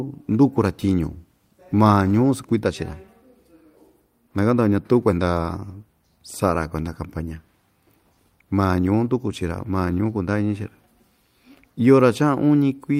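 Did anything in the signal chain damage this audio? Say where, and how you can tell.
No, nothing in the signal chain has audibly damaged this speech recording. No stage, from the wiring and conversion through to storage and playback, leaves a mark that can be heard.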